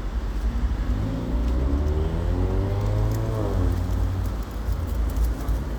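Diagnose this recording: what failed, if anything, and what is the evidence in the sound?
Nothing failed here that I can hear; every stage from capture to playback seems to have done its job, and the sounds come across with nothing in the recording chain calling attention to itself.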